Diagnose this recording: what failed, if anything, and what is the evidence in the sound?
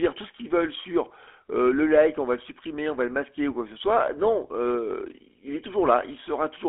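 Throughout, the speech sounds buzzy and gravelly, confined to roughly 300 Hz to 3.4 kHz. This is GSM full-rate codec damage at the codec stage, consistent with a 13 kbit/s coder. It rebuilds the voice from a vocal-tract model driven by sparse, regular pulses.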